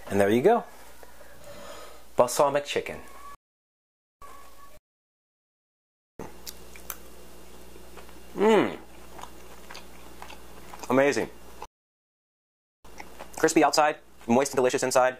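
The audio drops out twice in a playback stall. Silence runs from 3.35 to 4.22 s, about 0.87 s, and again from 11.66 to 12.85 s, about 1.19 s. The likely cause is the player running out of data or its thread being blocked. Each gap is followed by time-compressed catch-up, from 4.22 to 5.94 s and from 12.85 to 15.13 s. The sound is hurried to 1.5 times normal speed while its pitch stays the same. Small pieces are cut out and cross-faded to clear the backlog.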